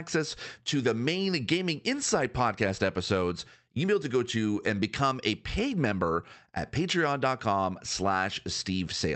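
No technical faults can be heard in the speech. It has passed through a WebRTC call path whose high end stops at about 8 kHz, which points to Opus coding at a moderate bitrate.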